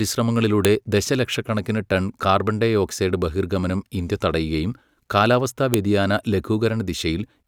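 At 0.65 s, just before "ദശലക്ഷക്കണക്കിന് ടൺ കാർബൺഡയോക്സൈഡ് ബഹിർഗമനം", and again at 5.74 s, a sharp snap marks a file header played as audio: header bytes from a joined piece decoded as samples. The waveform shows a tall, isolated spike; the spectrogram shows a thin full-band vertical line.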